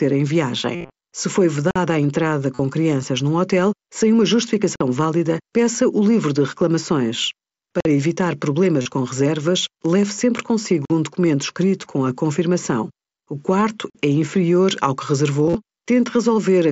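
From 0.74 to 0.90 s, concealed Bluetooth headset packet loss drops about 150 ms of audio scattered across 195 ms, with runs up to about 53 ms. The receiver repeats a recent stretch of waveform, giving a flat buzzy tone and a small warble as real sound resumes. On a spectrogram this shows as evenly spaced harmonic stripes held at constant level.

At 1.71 s comes the first gap between chunks: roughly 48 ms of hard-edged silence at a join between 3 s chunks. No audio is lost, but the flow breaks abruptly. The waveform drops straight to silence, and the spectrogram shows a clean blank vertical band.

Concealed Bluetooth headset packet loss returns from 2.55 to 2.59 s (45 ms), with the same short buzz.

The same roughly 48 ms gap between chunks recurs at 4.76 s and 7.80 s.

A further 37.5 ms of concealed Bluetooth headset packet loss buzzes at 8.82 to 8.86 s.

The gap between chunks appears again at 10.85 s and 13.90 s, every 3 s in all.

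The last concealed Bluetooth headset packet loss spans 15.44 to 15.55 s, with 60 ms lost in runs up to 37.5 ms.

The mSBC headset codec underneath caps the band at 8 kHz and adds only a faint grain on loud sounds.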